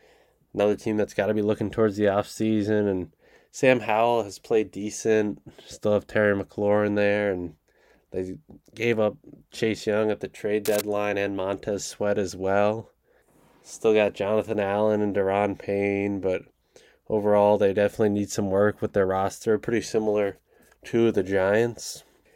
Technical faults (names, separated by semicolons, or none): cable scratch noise